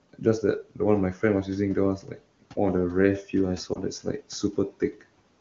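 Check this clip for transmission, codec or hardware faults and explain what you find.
Two faults can be heard: the noise suppressor repeatedly cuts into the speech, and there is one brief dropout from a lost AMR speech frame. The AMR wideband (HD Voice) coding sounds clean, which fits its top rate, and the room noise sits about 23 dB below the speech.

Speech cut by the noise suppressor occurs at 0.63 to 0.81 s, 1.14 to 1.23 s, 1.98 to 2.22 s, and across 4.0 to 5.03 s. In each stretch the speech suddenly thins and sinks, as if word edges were swallowed. The level falls by about 18 dB at most, and about 11 dB in the shortest cut. The suppressor mistook quieter parts of the speech for background noise and turned them down with the noise. In the last span, only about a third of a second in total is pulled down, in scattered pieces.

Lost AMR speech frames cause a short glitch at 3.74 to 3.78 s. 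The sound briefly smears and dips rather than cutting off cleanly, and it comes back slightly weak. A radio error corrupted the data, and the decoder dropped what it received. It then continued from the last good pitch and vocal tract settings, with the gain falling. The gap fits a single lost 20 ms frame, which is short enough for the concealment to bridge it before the sound fades away.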